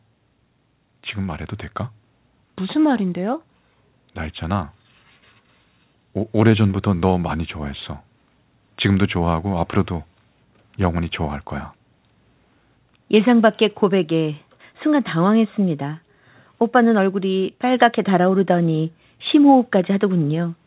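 No faults found in the speech; the band stops at 4 kHz, consistent with a narrowband G.711-type call path working as intended.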